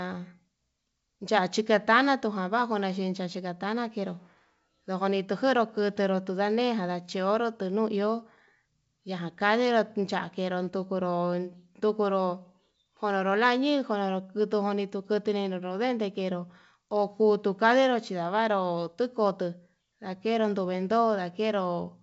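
No technical faults can be heard in this speech recording. The wideband telephone coding comes through with its usual bandwidth to about 7 kHz and at most a faint hiss in the upper band, which fits G.722 running at its full 64 kbit/s rate.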